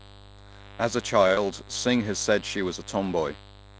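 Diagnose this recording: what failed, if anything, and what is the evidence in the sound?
Mains buzz enters in the analogue wiring and runs through the whole clip. It is a steady, raspy 50 Hz buzz, about 20 dB below the speech. Switching spikes twice per mains cycle spread harmonics upward, cut off at 8 kHz by the G.722 call path.

A short stall from a late packet hits the jitter buffer at 1.28 to 1.32 s. A packet arrived late and the buffer ran dry. The receiver held the last sound for 21 ms, then resumed where it stopped. Nothing is lost. Playback now sits 21 ms later.

Short concealed packet loss follows at 1.34 to 1.39 s. It is a network fault. About 20 ms of audio never arrived. The decoder extended the preceding sound over 27 ms and blended back. It is heard as a brief smear right after the stall.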